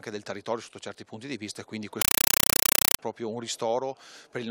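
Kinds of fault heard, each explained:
compressed stream played as audio: an encoded bitstream, which fits AC-3 at 256 kbps, was passed on as ordinary samples without being decoded, so from 2.02 to 2.99 s the sound becomes very loud static, chattering in 5.33 ms bursts 31.25 times a second.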